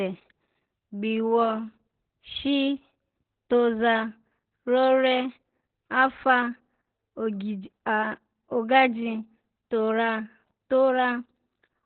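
Muffled, hoarse and slightly robotic from start to finish, this speech clip has nothing above about 4.3 kHz, so consonants lose their crispness and the whole thing sounds like an old telephone line. The damage is heavy Opus voice compression: the encoder has fallen back to its SILK linear-prediction coder in narrowband mode, trimming the band and coding the excitation coarsely, which fits a very low bitrate around 8 kbps.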